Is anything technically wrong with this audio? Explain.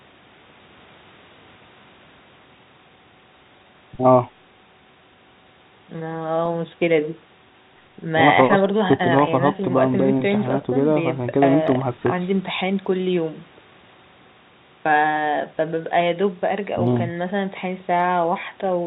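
No, nothing is technically wrong with this audio.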